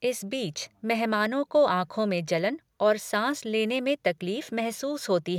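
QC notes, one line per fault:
No faults found in this speech clip. Nothing here needs a QC flag.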